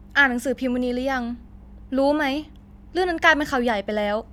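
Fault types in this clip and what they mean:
No technical fault can be heard anywhere in this speech clip. Nothing in the sound calls for a fault entry.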